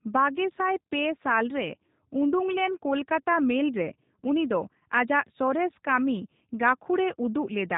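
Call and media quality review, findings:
G.729 codec damage across the whole speech clip, plainly audible: dull top end with nothing above 4 kHz, a rough synthetic edge. Probably the VoIP leg. It sounds like an 8 kbit/s G.729A path rebuilding speech from a vocal-tract model and sparse pulses.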